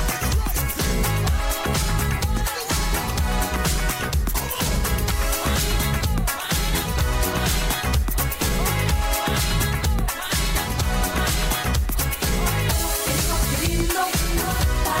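No technical faults heard anywhere in the clip, so nothing to log.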